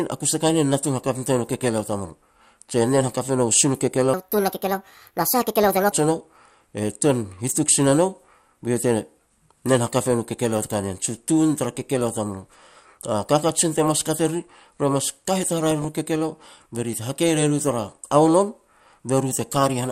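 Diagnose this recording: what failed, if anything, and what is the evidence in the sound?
Codec stage. The whole speech clip sounds dull and gurgling, with a granular edge. Upper sub-bands drop out and flicker, and what remains is coarsely quantised. That is MP2 compression, likely at a low rate around 80 kbps.

Playback or editing stage. From 4.14 to 5.92 s the speech runs hurried and high, about 1.43 times too fast and roughly seven semitones sharp. This section at the wrong speed likely comes from resampling against the wrong clock.

Transmission stage. At 15.66 to 15.85 s a short burst of noise blips in single sub-bands breaks through. That is DAB burbling. Uncorrected bit errors, a small fraction of a percent, corrupted the MP2 audio data across what sounds like about nine frames.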